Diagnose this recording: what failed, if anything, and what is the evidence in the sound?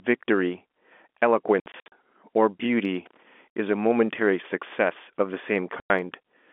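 Hard-edged silent holes chop the speech at 1.6 to 1.92 s, 3.52 to 3.56 s and 5.8 to 5.9 s. This is network packet loss filled with silence, with gaps that fit 20 ms packets.

A brief irregular crackle runs from 3.06 to 3.25 s. It is loose connector crackle, where a worn contact in the analogue wiring rapidly makes and breaks the signal.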